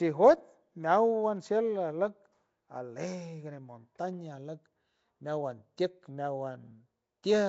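Speech passed through what is likely Nellymoser compression, the old Flash microphone codec, whose coarse fixed allocation of roughly two bits per sample starves weak bands and replaces them with noise. The damage sounds like a bitrate around 32 kbps and runs the full clip: the speech carries a rough, hissy halo and a smeared, underwater quality, and there is nothing above 7.7 kHz, leaving the top end dull beneath the grain.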